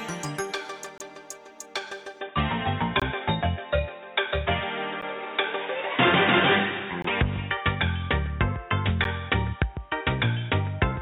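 The audio is broken by five short, hard-edged silences from gaps between stream segments, at 0.98, 3.00, 5.01, 7.02 and 9.04 s, each lasting roughly 10 to 22 ms. They fall at the 2-second segment boundaries, where mismatched timestamps leave holes that the player fills with silence. No audio is lost. From 2.21 s to the end, the sound turns dull and boxy, with nothing above 3.8 kHz, a new noise floor around 40 dB below the signal, and a level shift of around 5 dB, with no silence at the transition. This is likely the input switching to a poorer device.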